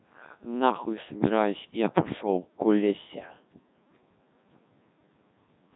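Codec 2 vocoder damage runs through the whole speech clip. The decoder rebuilds the voice from sine waves driven by pitch, voicing and envelope data, discarding the real waveform. The result is heavily robotic and buzzy, with nothing above 3.8 kHz, which fits a 1.6 kbit/s mode.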